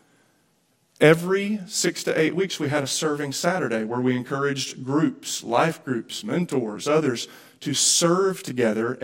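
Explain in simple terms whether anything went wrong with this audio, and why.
From 1.2 s to the end, the speech turns rough and slightly doubled because of a channel delay (comb filtering). One channel runs about 20 ms behind the other, and when the two are combined, matching parts cancel at evenly spaced pitches, starting very low.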